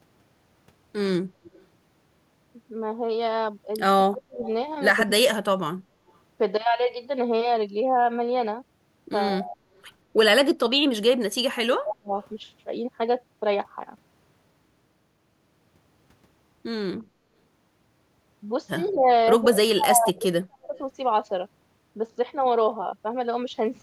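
At 1.45 to 1.65 s a faint echo leak appears: a delayed copy of the speech trailing it by 180 ms, likely because a far-end loudspeaker's echo canceller let some of its microphone pickup through and sent it back. On a spectrogram it shows as a weak duplicate of the harmonic pattern shifted 180 ms later. It recurs, stronger, at 4.43 to 5.01 s, and briefly and very quietly at 12.23 s and 18.89 s, always at the same 180 ms lag.

From 4.09 to 5.76 s the speech is suppressed in double talk: with both sides active, the canceller likely mistook the talker for echo and clamped the signal, cutting it by about 35 dB for roughly 0.7 s in patches. The waveform shows sudden notches in the envelope, and the spectrogram shows the upper bands thinning or vanishing. Smaller dips follow at 9.4 to 9.57 s (about 15 dB) and 11.46 to 12.12 s (about 30 dB). The longest runs from 18.89 to 20.76 s, with gaps totalling around 1.5 s.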